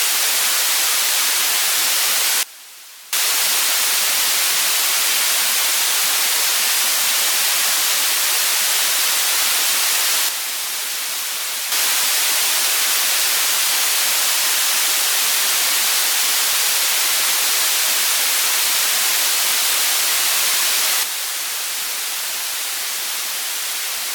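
A digital gain step likely applied without any ramp causes three sudden gain jumps: level drops by about 22 dB from 2.43 to 3.13 s, by about 6 dB from 10.29 to 11.72 s, and by about 6 dB from 21.03 s to the end, with background noise dropping in step.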